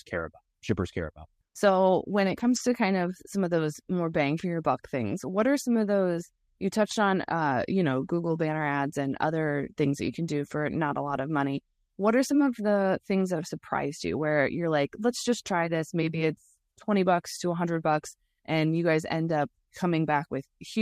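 At 2.27 to 2.57 s and again at 11.07 to 11.17 s, the speech turns briefly rougher and noisier with no gap: lost packets rebuilt from error correction. The decoder played the low-bitrate copies carried in the following packets, about 160 ms and 60 ms of rebuilt audio.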